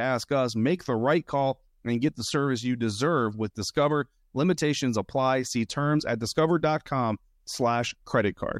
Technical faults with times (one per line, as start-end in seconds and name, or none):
none